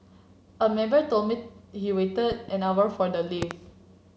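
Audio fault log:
2.32–2.51 s, loud pop: a likely electrical glitch, such as a switch or static discharge, injects a voltage pulse, giving two sharp pops about 5 dB above the speech.
3.42–3.53 s, loud pop: a likely stronger voltage pulse from a plug or driver glitch jolts the signal, giving two quick, harsh pops about 15 dB above the speech.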